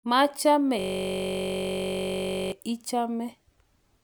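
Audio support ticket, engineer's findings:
System hang loop, 0.79 to 2.52 s: speech drops into a steady buzz near 47 Hz. Host or driver froze while the audio device kept replaying one 21.33 ms ring-buffer segment, which fits a 1024-sample buffer. Check driver/DPC stalls.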